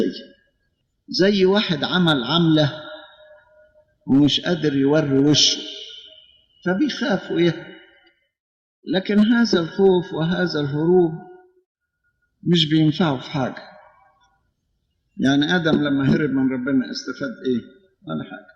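No technical faults are audible.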